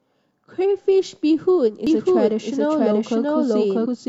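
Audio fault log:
1.64–1.70 s and 3.82–3.86 s, damaged data in a compressed stream: two short blips, each a few tens of milliseconds, where corrupted frames trip the decoder. It loses sync, hunts for the next valid frame header, then carries on from there.
1.87 s to the end, doubled audio track: a second full-band copy cuts in abruptly and trails about 0.7 s behind at roughly the same level, completely dry with no decay. It's likely a second, slower capture path or an edit holding two out-of-step copies.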